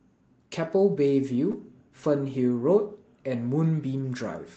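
A lost packet rebuilt from error correction occurs twice in this speech, from 1.51 to 1.53 s and from 2.59 to 2.61 s, each a single 20 ms stretch. Each time one Opus packet failed to arrive, and the decoder filled the slot with the low-bitrate backup copy carried in the next packet. There is no dropout, just two brief patches that sound rougher and noisier than the surrounding audio, against the call path's 8 kHz bandwidth.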